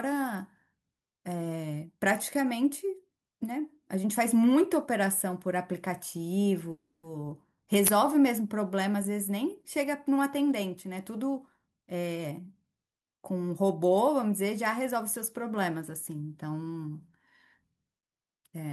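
At 6.71 to 7.05 s the sound stalls into a fading buzz, then about 220 ms of silence, likely a call audio freeze. On a spectrogram this shows as smeared horizontal bands dissolving into a blank gap. From 11.74 to 13.05 s a jitter buffer speed-up plays the audio at 125% pace without changing pitch, trimming about 0.3 s of pitch periods. In the waveform, whole cycles are cut out while each remaining cycle keeps its length.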